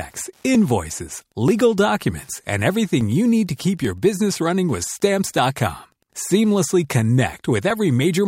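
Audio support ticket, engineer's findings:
Wi-Fi interference: faint steady ticking throughout, one tick every 102.4 ms, about ten per second, well below the speech. Probable component: Wi-Fi radio near the analogue path. Beacon transmissions picked up and rectified by the audio circuit.

Dropped samples: two single sharp clicks, at 1.48 s just before "documents and" and at 3.01 s between "documents and" and "you need". Likely a gap of under a millisecond in the sample stream, making the waveform jump.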